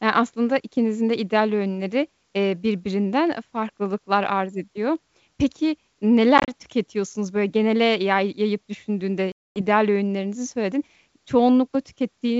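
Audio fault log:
6.38–6.53 s, packet loss on an ADPCM call: several short silent holes totalling 70 ms, longest 30 ms, before "tüketiyorsunuz böyle genele yay". They show as sharp-edged blank gaps on the waveform and spectrogram. The decoder's predictor loses step, so the audio resumes slightly distorted.
9.32–9.62 s, packet loss on an ADPCM call: 240 ms lost between "genele yay yayıp düşündüğünde" and "öğünlerinizi söyledin". It appears as a flat, vertically cut waveform gap. Speech then returns slightly distorted while the ADPCM state realigns.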